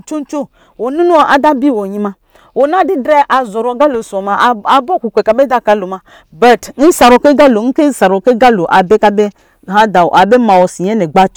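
Hard clipping runs through the whole speech clip. The signal is driven about 14 dB past what the stage can pass. Every peak is sliced flat, roughly one sample in twenty. The flat tops add high harmonics, heard as harsh fuzz on each loud syllable.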